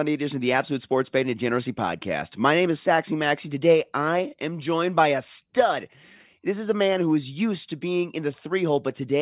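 No technical faults are audible.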